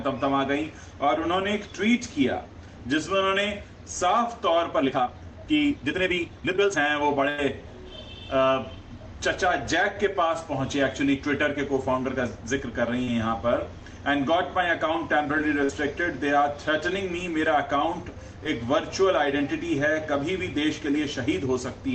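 From 4.71 to 6.77 s the pace suddenly jumps to about 1.79 times normal while the pitch holds steady, so that stretch sounds rushed. That's likely a time-stretched section, squeezed to fit a length by dropping short slices rather than resampling.

At 7.30 to 7.39 s there's a burst of packet loss. About 90 ms never arrived, and the receiver spent roughly 83 ms continuing the last sound and fading it. You hear a held, dying tail before the audio picks up further along with that piece gone.

At 13.04 to 13.08 s there's a short concealed packet loss. About 30 ms went missing and was patched by extending the previous sound, then blended back in. It comes across as a brief smear.

A second burst of packet loss hits at 15.64 to 15.70 s. This time about 50 ms is missing, with about 49 ms of fading fill, so the tail is shorter but the audio still skips forward.

At 18.44 s a tiny concealed packet loss, about 10 ms, leaves just a brief smear. 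Throughout, the call path keeps the top end capped around 8 kHz, along with its usual coding noise.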